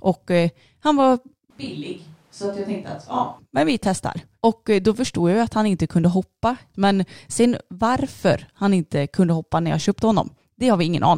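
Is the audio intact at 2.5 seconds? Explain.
No. A switch to a distant microphone runs from 1.50 s to 3.39 s, between "eh han var" and "men vi testar". The speech abruptly turns roomy and hollow, loses bass, drops by about 5 dB, and carries a louder background noise floor roughly 30 dB below the speech. The close microphone's signal was likely lost and replaced by a pickup farther away. The sound snaps back just as suddenly at 3.39 s.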